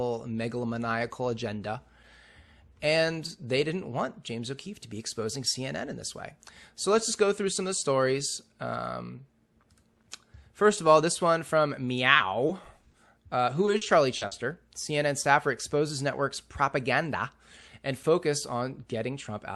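Speech, with short concealed packet loss just after "all this one from" at 12.13 and 12.17 s, then at 12.47 and 12.91 s. At each point about 20 ms of audio did not arrive in time, and the receiver filled it by extending the preceding sound, leaving brief smears or wobbles. From 13.65 to 14.33 s, repeated packet loss produces a choppy stretch: four separate holes, the longest about 40 ms, were patched in quick succession, so roughly a fifth of that span is synthesised fill rather than real speech.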